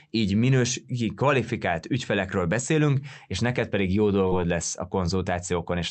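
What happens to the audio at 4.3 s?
At 4.27 to 4.34 s there is a short concealed packet loss: about 40 ms of the speech arrived too late for the decoder, which filled the gap by extending the preceding sound, repeating its pitch for voiced sound or shaping noise for unvoiced sound, before fading back into the real signal. It comes across as a brief smear or wobble. On a spectrogram, a voiced gap shows harmonics running flat and blurred across it, and the waveform a repeated cycle where the speech should have changed.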